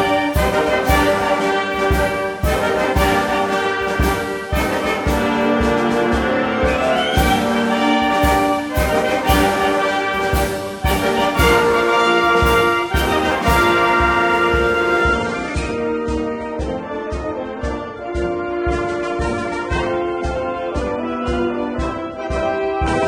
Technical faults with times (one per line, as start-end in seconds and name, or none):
15.03-23.07 adaptive stream at a lower bitrate